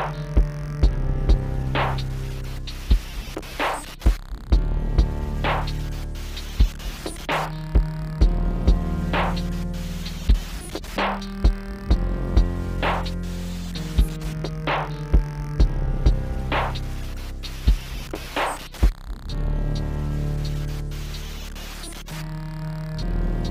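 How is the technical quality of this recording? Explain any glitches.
No glitches or technical faults can be heard anywhere in this recording. Its quality holds steady throughout, with nothing that breaks up, drops out or jumps in the sound.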